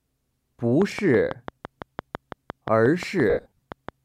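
A regular train of clicks runs through the sound from 0.82 s to 3.90 s, ticking at about 5.9 per second, roughly twenty in all. The clicks share much the same shape and stand well above the programme, peaking around 10 dB over it, so they are audible during quieter passages as well as louder ones. Their steady spacing and identical form most likely come from electrical interference or a struggling interface injecting a pulse into the signal path. Between 3.30 s and 3.60 s there are lost LE Audio frames, with about 230 ms of audio missing, scattered across a 320 ms stretch. The longest single gap lasts around 70 ms. During each gap the LC3 decoder repeats the last spectrum with randomised phase signs, so tonal content smears into a noisy wash. Over the longer runs that concealment fades down toward silence before normal decoding resumes.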